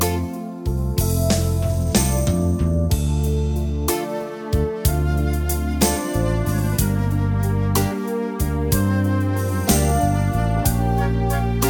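Nothing is technically wrong with this audio.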